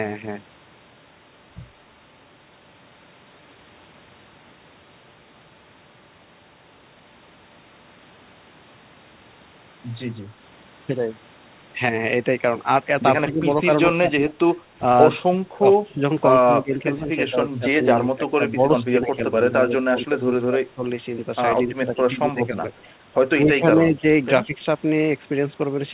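From 13.24 s the speech starts to sag. Level drops of about 10 dB come at 13.24–13.45 s, and deeper drops of about 25 dB at 13.97–14.56 s and 15.57–16.02 s. The longest stretch runs from 16.45 to 20.83 s, with around three seconds pulled down by up to about 15 dB. Further dips follow at 21.67–22.61 s, 23.35–24.03 s and 24.43–24.65 s. This is likely speech suppressed in double talk. The echo canceller mistakes the talker for returning echo and turns everything down, so words thin out or break into pieces.

At 22.78–22.85 s there is an echo leak. A faint copy of the speech comes back 112 ms late and about 40 dB under the voice. It is a brief scrap, likely loudspeaker pickup the canceller failed to remove. Throughout, nothing above 4 kHz survives, which fits a narrowband G.711 call path.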